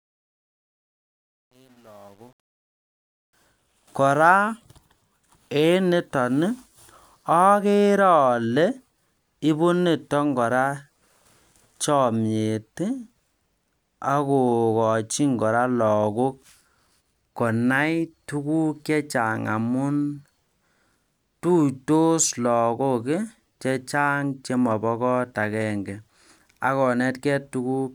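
The speech opens with truncation distortion on the fade-in, running from the start to 3.33 s. The fade's level ramp itself rises cleanly, but the gain stage dropped low-order bits without dither, which fits roughly 9-bit resolution. At those low levels the waveform collapses into coarse steps, so up to about 2.83 s the sound comes through gritty, before cleaning up as the fade reaches full level.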